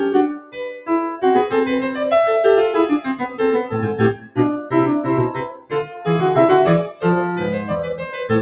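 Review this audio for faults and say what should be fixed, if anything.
A noise suppressor applied to music keeps treating sustained parts as noise, so the level pumps by around 10 dB; the waveform envelope visibly breathes rather than holding steady.

Sound cut by the noise suppressor appears at 0.29–0.9 s (about 17 dB down), 3.23–3.4 s (about 8 dB), 4.14–4.38 s (about 17 dB), 5.46–6.06 s (about 18 dB) and 6.89–7.04 s (about 12 dB). Held tones and decays collapse there, leaving waveform dips and faded spectrogram bands.

Disable speech noise suppression, or switch the call to a music mode, whenever music is being sent.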